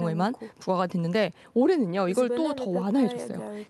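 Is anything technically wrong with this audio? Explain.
No, nothing is technically wrong; the speech has come through a WebRTC call path, where the top end rolling off near 12 kHz and the light coding texture are what an Opus link at around 48 kbps normally leaves.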